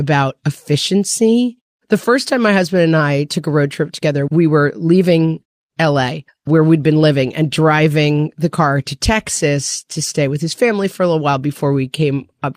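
A speech recording with no technical faults to report.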